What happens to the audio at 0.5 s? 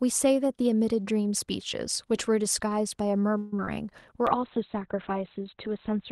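Nothing goes wrong at 0.5 s; the speech there plays through intact, with no dropout, click or distortion.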